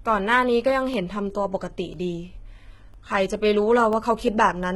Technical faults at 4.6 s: HE-AAC compression

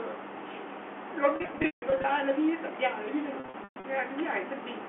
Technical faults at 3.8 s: packet loss with pitch repetition

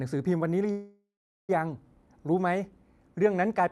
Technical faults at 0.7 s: call audio freeze

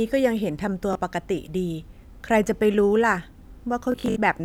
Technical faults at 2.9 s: none

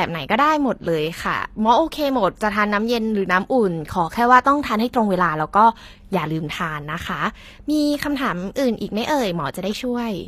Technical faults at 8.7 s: HE-AAC compression

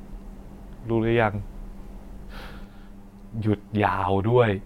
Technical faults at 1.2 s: none

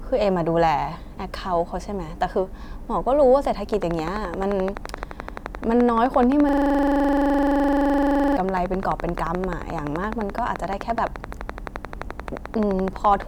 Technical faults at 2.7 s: none

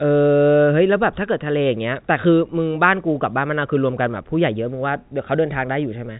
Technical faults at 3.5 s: none

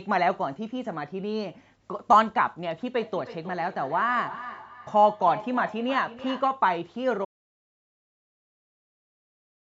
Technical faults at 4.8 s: feedback echo between two devices

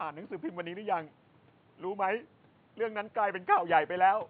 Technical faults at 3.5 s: none

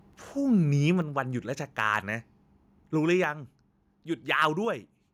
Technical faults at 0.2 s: none

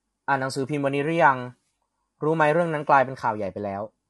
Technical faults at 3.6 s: low-delay AAC compression

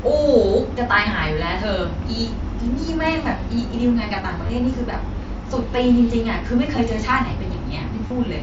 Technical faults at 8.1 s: concealed Bluetooth headset packet loss

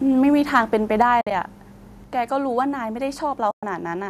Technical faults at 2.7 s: none

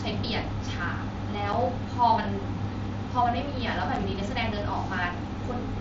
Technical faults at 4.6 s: none

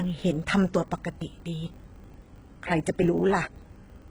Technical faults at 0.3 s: HE-AAC compression; filter restarted on every block; audio missing between chunks

